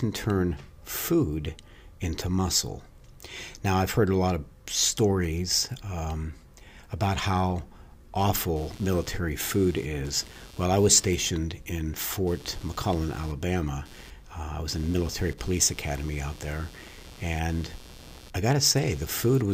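From 8.56 s to the end at 19.54 s, computer activity noise rides under the speech as a buzzy chirping, roughly 150 pulses per second, about 25 dB below the voice. Processor load shifts the shared ground. Unlike steady mains hum, it fluctuates with computer activity, not the sound.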